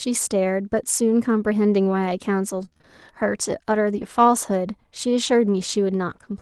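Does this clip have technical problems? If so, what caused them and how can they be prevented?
Yes, two packet-loss problems show up in this speech clip.

From 2.57 to 2.85 s there's repeated packet loss, giving that choppy, robotic sound. Packets went missing five times in quick succession, with the longest hole about 25 ms. Each time, the decoder papered over the gap by stretching out the last bit of audio, so roughly a third of that stretch is concealment rather than real signal. Some forty milliseconds of it is only roughly rebuilt. A steadier network path or a deeper jitter buffer would keep this from happening.

From 3.93 to 4.03 s you get a lost packet rebuilt from error correction. Three packets were lost, but the following packets carried low-bitrate backup copies through Opus in-band forward error correction. The decoder played those instead, so there's no dropout, but about 60 ms comes out rougher and noisier than its surroundings. 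The call itself sounds like Opus at around 32 kbps with the top end stopping near 12 kHz. To avoid this, fix the loss on the link, or raise the bitrate so the backup copies sound closer to the original.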